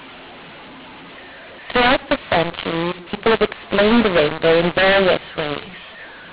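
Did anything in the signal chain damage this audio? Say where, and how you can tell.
Yes, at the codec stage: mu-law and A-law mixed up. Mu-law samples decoded as A-law scramble levels throughout, so speech sounds harsh and pauses fill with noise.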